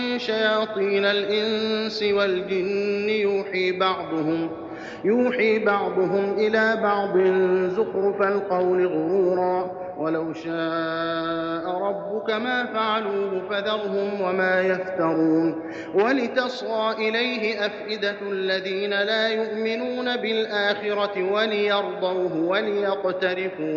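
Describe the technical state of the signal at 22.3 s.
At 22.3 s the signal is intact, with no audible fault at that point.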